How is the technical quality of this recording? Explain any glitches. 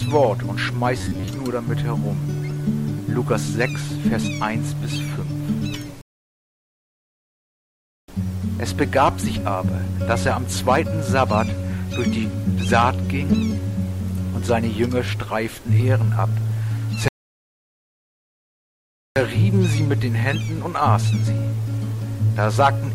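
The recording has two kinds of glitch: a brief robotic passage near the start and two long stalls later on.

From 0.98 to 1.29 s the sound turns into a rigid, metallic buzz pitched at about 93.8 Hz. This is robotic sound from repeated short buffers, likely caused by audio arriving too slowly so that the playback software kept looping its last chunk of roughly 10.7 ms, one period of that buzz, while about half the real audio was skipped. Plain crackle or stutter would be irregular. Here the steady, fixed pitch is what gives the repetition away.

At 6.01 to 8.08 s and again at 17.08 to 19.16 s the sound drops to silence and then picks up exactly where it stopped. These are rebuffering stalls: the player ran out of downloaded audio and waited for more, adding about 2.07 s and 2.08 s of silence. A dropout would lose material across the gap. Here nothing is missing, and the recording simply runs longer.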